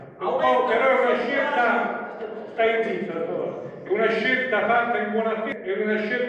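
No technical faults are audible.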